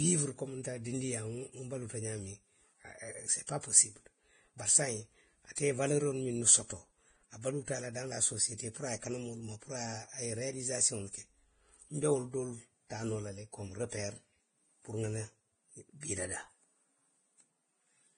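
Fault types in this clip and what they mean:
Vorbis compression: Throughout the speech, nothing reaches above 9.7 kHz, and the remaining treble sounds hissy and grainy, with roughened tones and softened consonant onsets. The likely cause is heavy Vorbis coding at a low bitrate, roughly what 23 kbps would give, where coarse quantisation swaps fine high-frequency detail for noise of similar energy. A spectrogram shows a hard horizontal ceiling at 9.7 kHz, with speckled, noisy texture replacing clean harmonics below it.
Pre-echo: Short bursts of hiss arrive just before sharp attacks, at 0.63 s, 3.47–3.49 s, 5.55–5.58 s, 8.58–8.60 s and 16.01–16.03 s, each spread over about 16 to 22 ms. The codec sized its quantisation noise for the loud transient and spread it across the whole block, so it spills into the quiet moment ahead. On a waveform, a faint fuzzy lead-in precedes each onset. A spectrogram shows a thin broadband smear just before the attack.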